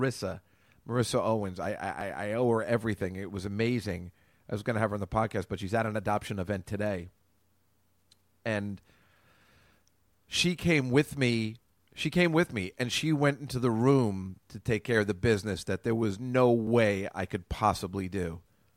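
Dropped buffer (overrun) at 2.01 s, just before "I owe her everything", and at 16.67 s, between "that there was no" and "I could": each is a jump where a few milliseconds likely went uncollected before being overwritten, the sound jumping straight ahead.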